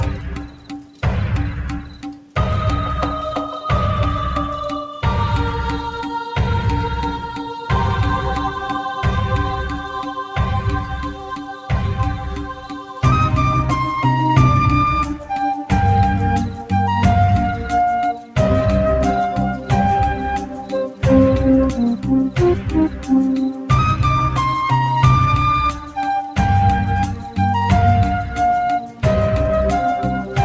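A noise suppressor applied to music or sounds runs through the whole clip. A suppressor tuned for speech treats sustained tones, ambience and reverb as noise, so the level swings by around 10 dB as it clamps down and lets go. The result pumps and flutters, with onsets intact but held sound and tails thinning. Unlike a dropout or codec glitch, nothing vanishes outright. The level sinks and recovers in step with how steady the material is. The sound passes through a G.722 call path at 64 kbps, with nothing above 8 kHz.

The sound cut by the noise suppressor is deepest in eight stretches: 0.18 to 2.36 s (about 11 dB down), 10.21 to 13.03 s (about 10 dB), 15.16 to 16.72 s (about 7 dB), 17.63 to 18.36 s, 19.54 to 21.03 s, 21.96 to 23.7 s, 25.71 to 29.03 s (each about 11 dB), and 30.2 to 30.38 s (about 7 dB). In each, sustained or decaying sound is pulled down or its tail truncated while sharp transients survive. 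That separates it from a gate closing or packet loss, which would silence everything alike.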